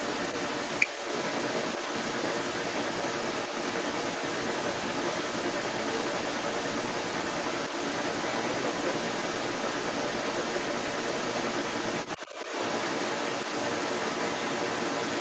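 From 0 to 15.2 s, the other side's voice leaks through for the whole clip, at around 10 dB relative to the talker's speech. A second voice comes through, band-limited, like audio picked up from a loudspeaker. The likely cause is that the talker's device played the far end aloud and its echo canceller left a residue in the microphone signal. Because it never clears, the leak competes with the talker throughout, capped at 8 kHz like the rest of the call audio.

Between 12.17 and 12.5 s, the talker's speech is suppressed in double talk. With both sides active at once, the near voice dips by up to roughly 10 dB, for about 200 ms in total within that window, sounding briefly pushed back. This is likely the echo canceller failing to separate the local talker from the loudspeaker echo and attenuating everything together rather than removing only the echo.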